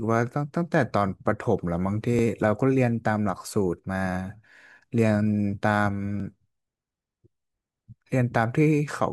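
Overlapping chunks: the speech was handled in pieces about 4 s long, and each new piece began slightly before the previous one had finished, so the boundary material was played out twice. At each join a fragment of about 12 ms repeats, heard as a brief click or stutter in the speech at 2.19 s and again at 6.20 s. The 4 s spacing between the two glitches matches that chunk length.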